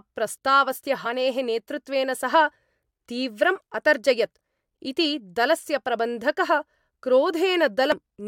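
A speech clip with two short bursts of damaged data in a compressed stream. The first comes at 1.05 s, just before "नेतृत्वेन सः". The second runs from 7.92 to 7.94 s. Each is brief. Corrupted bytes made the decoder misread those frames. It lost sync and jumped to the next valid frame header.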